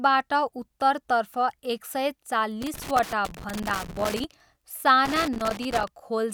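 A speech recording with loose connector crackle in two bursts, from 2.62 to 4.24 s and again from 5.05 to 5.88 s. In each stretch a worn or dirty contact in the signal path is intermittently losing and regaining connection as it shifts, so the audio is chopped into fragments, and any DC present on the line turns each make and break into a pop. The result is irregular scratching crackle laid over the speech.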